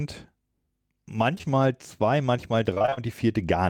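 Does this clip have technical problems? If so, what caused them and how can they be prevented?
Yes. Short concealed packet loss: around 20 ms of audio at a time arrived too late or not at all, at 1.35–1.50 s, 1.38–1.41 s and 1.41–1.45 s, just before "zwei manchmal". The receiver extended the preceding sound for roughly 10 to 18 ms and then blended back, leaving a brief smear and wobble and stretching timing by a few milliseconds. A larger adaptive jitter buffer and forward error correction would help prevent this.

Repeated packet loss (robotic sound): from 2.74 to 2.99 s the network dropped data again and again, in six breaks of up to 29 ms. Concealment patched about half of that stretch with continued sound, so it comes out choppy, with pieces missing. A more stable connection, such as wired rather than congested Wi-Fi, combined with redundancy coding, would prevent these bursts.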